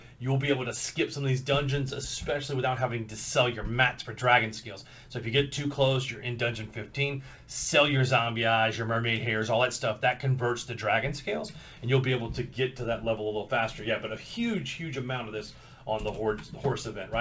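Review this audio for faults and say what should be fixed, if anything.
Nothing here needs fixing. The audio has passed through a call path with a wideband codec, which fits G.722, so there is nothing above 8 kHz.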